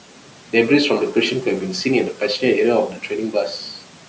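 Noise suppressor artifacts run under the whole clip. The suppressor keeps ducking whatever bands it reads as steady room noise, so that noise, sitting about 19 dB below the speech, sinks in the pauses and creeps back up under the talking. There's also speech cut by the noise suppressor, where it mistook quiet speech for background: 0.1 to 0.53 s, 2.9 to 3.11 s, and 3.73 to 4.04 s. Each stretch loses something like a fifth of a second of sound, pulled down by about 12, 12 and 13 dB at worst, so those bits come out swallowed and faint.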